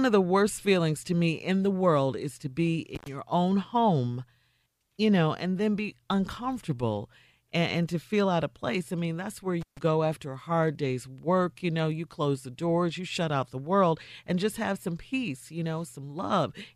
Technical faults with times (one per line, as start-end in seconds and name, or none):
2.95-3.08 intermittent contact
9.61-9.79 intermittent contact